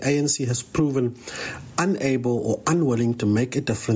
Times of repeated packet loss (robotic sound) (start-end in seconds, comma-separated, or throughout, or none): none